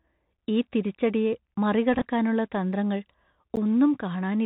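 Speech heard through a narrow, band-limited channel, with nothing above 4 kHz, scratchy s sounds, harsh peaks on loud high-frequency parts, and a grainy hiss under the voice for the whole clip. This is the Bluetooth CVSD headset codec, which fits 64 kbps CVSD: a one-bit up-or-down encoder whose adaptive step cannot keep pace with fast, bright sounds. Two short, hard-edged holes of about 12 ms interrupt the audio at 1.55 s, just after "ഈ തിരിച്ചടിയെ", and again at 3.56 s. They are gaps between chunks: the sound arrives in 2-second blocks and silence is left at each join, so nothing is lost but the flow breaks. From 1.94 to 2.02 s the sound turns briefly buzzy and stuttering. About 34 ms of audio was lost, scattered across 75 ms, with the longest unbroken stretch only a few milliseconds. That points to a Bluetooth headset packet repeated over several lost packets, with the chip re-decoding the last good packet each time.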